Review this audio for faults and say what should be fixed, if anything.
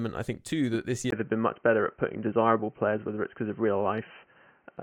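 Input switched to a poorer device at 1.10 s: a 20 ms gap, then speech stops at 3.1 kHz and shifts about 5 dB, likely a narrowband microphone taking over. Lock the recording input to one device and disable automatic switching to headsets or call profiles during capture.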